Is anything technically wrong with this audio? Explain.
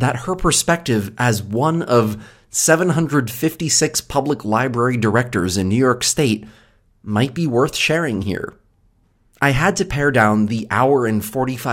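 No, nothing here points to a technical fault. The speech comes through without any audible problem in how it was recorded or reproduced.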